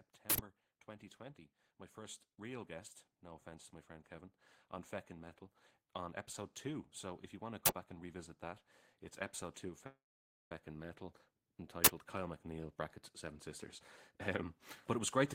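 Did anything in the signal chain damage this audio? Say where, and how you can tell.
Yes. There are three uninitialised buffer bursts in the driver or buffer stage, at 0.30 to 0.38 s, 7.66 to 7.68 s and 11.85 to 11.87 s. Each is a short, loud crack or burst of digital noise where a block was played before real audio was written into it, so stale memory became samples. The first lasts 85 ms, which fits a 4096-sample buffer. The other two last about 21 ms, fitting 1024-sample blocks. On a waveform they appear as sudden rectangles; a spectrogram shows hard-edged broadband columns.

At 9.86 to 10.52 s there is a call audio freeze, likely from packets delayed on the network so the jitter buffer ran dry. The last sound is stretched into a brief fading buzz, then about 0.52 s of silence, and the audio resumes exactly where it stopped. Nothing is lost, but about 0.65 s is inserted and the delay grows by that much. 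The spectrogram shows a smeared, decaying tail and then a blank band.

From 14.11 to 15.25 s there is a jitter buffer speed-up. The receiver trims tiny pitch-period slices again and again to shrink the buffer. This removes roughly a tenth of a second, so the audio runs at 109% speed with unchanged pitch and sounds hurried. On a spectrogram the harmonics stay at the same frequencies while syllable spacing tightens, and the waveform shows small repeated splices.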